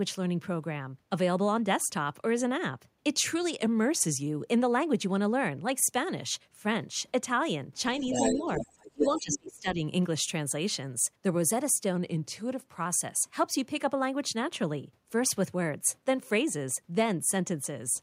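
Drift correction step, 3.63 to 4.27 s: the speech slows by 5.7% and drops 101 cents, about a semitone, likely a clock-matching resampler refilling its buffer. Other side's voice leaking through, 7.99 to 8.39 s: a second voice arrives at roughly the same level as the speech, likely loudspeaker echo the canceller missed. Speech suppressed in double talk, 8.1 to 8.72 s: the talker dips by up to roughly 15 dB across roughly 0.4 s as the canceller, likely confused by simultaneous talk, turns everything down. The other side's voice leaks through again from 8.55 to 9.39 s, about 5 dB below the speech. Speech is suppressed in double talk again from 8.92 to 9.82 s, turned down over roughly 0.7 s by up to around 30 dB. A second drift correction step, 11.96 to 12.86 s, repeats the same 5.7% slowdown and semitone fall.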